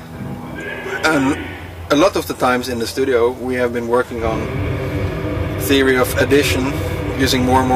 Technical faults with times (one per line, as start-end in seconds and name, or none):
1.91-2.07 hard clipping
5.71-6.51 hard clipping
7.23-7.75 hard clipping